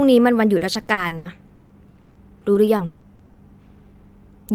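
From 0.57 to 3.37 s, repeated packet loss leaves gaps up to 140 ms, filled by repeating earlier sound, so the speech turns choppy and robotic.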